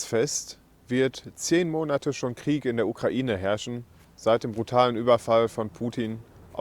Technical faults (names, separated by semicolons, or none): none